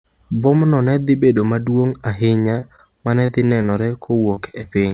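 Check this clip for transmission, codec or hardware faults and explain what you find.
Yes, three kinds of network fault are audible in this speech, carried over a call path with nothing above 4 kHz, which fits a narrowband G.711 link.

A short stall from a late packet occurs at 2.42 to 2.54 s, right after "ne dhi bedo maduong’". A packet arrived late, the jitter buffer drained, and the receiver held the last sound for about 18 ms before resuming at the same point. Nothing is lost, so it sounds like a brief drawn-out sound with a slight buzz or dip, not a smear.

Short concealed packet loss occurs at 2.60 s and 2.76 s, just before "ma ne dhi", then at 3.26 s and across 3.62 to 3.70 s. Each time about 20 ms never arrived, and the receiver continued the previous sound to cover the gap. Unlike the stall, real audio is missing, so these come through as quick smears or wobbles.

Repeated packet loss (robotic sound) runs from 4.06 to 4.65 s. 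Four gaps, the longest 22 ms, are patched one after another, and about 12% of that stretch is filled in. Because the patches follow in quick succession instead of standing alone, the audio turns choppy.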